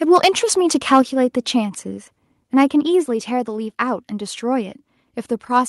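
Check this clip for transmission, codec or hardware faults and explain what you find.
Two hardware-side faults show up in this speech clip: brief distortion on loud peaks, and two sudden drops in input level.

Microphone overload occurs from 0.15 to 0.28 s and again from 0.92 to 1.0 s. The loudest moments turn harsh and crackly, with the tops pushing about 4 dB and then about 3 dB past the converter's limit. A small share of samples is flattened in the first burst, and a noticeably larger share in the second. The likely cause is input gain set too high, so the waveform peaks hit the converter's ceiling and are squared off. Unlike codec distortion, the crackle follows the loudest syllables and is absent from quieter passages.

Microphone volume stepped down occurs at 1.02 s and again at 3.06 s. Each time, the speech and the background noise floor drop together by about 4 dB, instantly rather than over a gradual slope. 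The first drop comes right after the second overloaded burst, which suggests the call software likely reacted to the clipping by lowering the device's input volume. This is a gain step and not a dropout or a fade.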